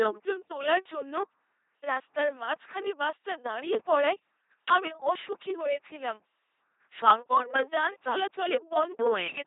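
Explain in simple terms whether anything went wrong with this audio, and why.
The speech passed through an LPC-10 vocoder, which rebuilds it from crude buzz or hiss, so it sounds robotic and buzzy throughout, with nothing above 3.8 kHz.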